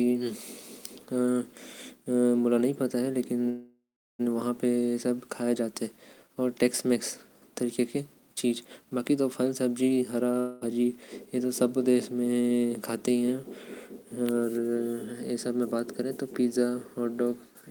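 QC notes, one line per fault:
3.49 to 4.21 s, call audio freeze: the speech halts and its last sound is stretched into a buzzy hiss that fades over roughly a third of a second, then about 0.35 s of silence follows before speech resumes intact, now running about 0.70 s later than before. This likely comes from delayed packets leaving the jitter buffer empty. On a spectrogram the final frame appears as smeared horizontal bands that dim into a blank gap. The waveform shows a decaying tail, then a flat line.
10.40 to 10.63 s, long network dropout: for about 0.22 s the speech is replaced by a buzzy continuation of its last sound that fades without reaching full silence. Speech then returns further on, with roughly 0.22 s of the original audio gone. The likely cause is a stretch of lost packets that the receiver concealed rather than waited for. A spectrogram shows a short band of repeated, dimming harmonics ending in an abrupt change of content. 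The waveform shows a smooth, shrinking envelope followed by a sudden jump.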